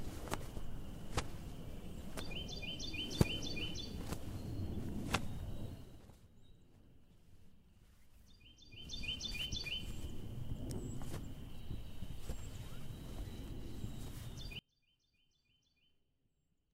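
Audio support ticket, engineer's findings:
Zipper noise, 8.64 to 9.04 s: ticking rides on the sound during a level change of around 15 dB. Gain stage applying 1 dB steps, about 40 a second, unsmoothed; each step clicks.

Audio dropout to a faint residue, 14.59 s to end: sound cuts out abruptly, leaving only a faint leak about 35 dB down. Likely an upstream source or link loss, with the downstream path still live.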